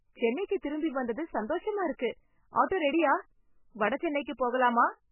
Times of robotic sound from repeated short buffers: none

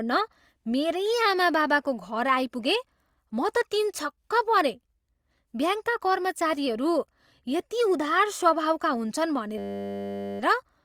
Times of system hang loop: 9.58-10.40

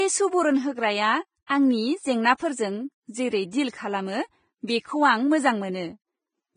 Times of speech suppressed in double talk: none

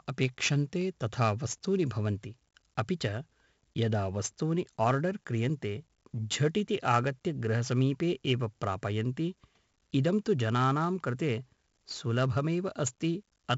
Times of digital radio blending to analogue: none

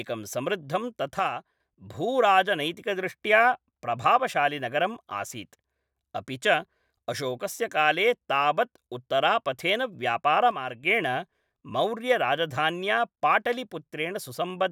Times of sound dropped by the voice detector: none

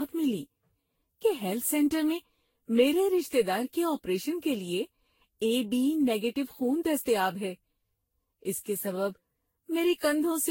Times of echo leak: none

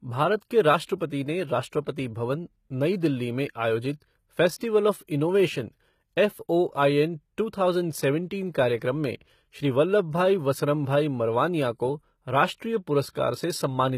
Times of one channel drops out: none

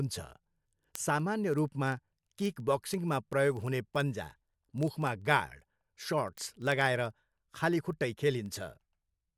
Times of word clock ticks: 0.13-9.33

